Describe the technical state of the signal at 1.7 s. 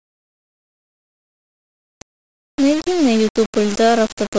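Low bit depth without dither at 1.7 s, as throughout: speech is likely rounded to about 4 bits, so level-tracking error near 15 dB down makes it gritty and grainy.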